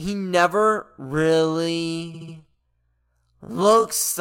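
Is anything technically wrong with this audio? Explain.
Yes, two faults. From 0.8 s to the end, where "the part" follows, a time-stretched section runs at about half speed with unchanged pitch, sounding dragged. It is likely software stretching that repeats short pieces. From 2.13 to 2.34 s, repeated frames replay a 69.7 ms block three extra times, adding 209 ms. This is an exact stutter, unlike the stretch's steady drag.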